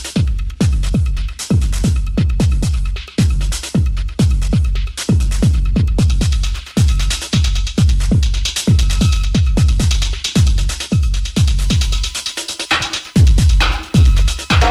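At 11.59 s a USB whine begins and runs to the end at 14.70 s. It is a thin, steady tone of fixed pitch. The fundamental sits at 1 kHz, but the strongest part is the third harmonic at 3 kHz. That 1 kHz spacing matches the bus's 1 ms frame rate. Current drawn in each frame is leaking into the audio through the power or ground. The whine sits roughly 35 dB below the sound.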